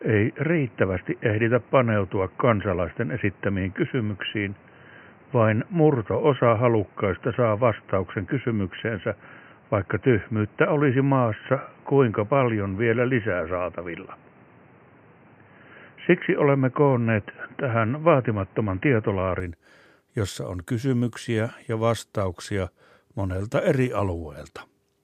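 From the start to 19.4 s the speech is dull and boxy, with nothing above 3 kHz, a noticeably different tone and level, and its own background noise well below the voice. At 19.4 s the sound clears abruptly, with no gap. This likely means the input switched to a poorer device and then back. A simple bandwidth drop would not also shift the level, tone and noise floor together at the same moment.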